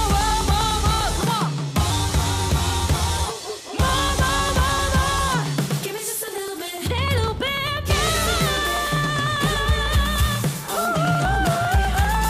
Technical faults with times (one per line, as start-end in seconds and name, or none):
0.11-12.25 periodic USB or driver dropouts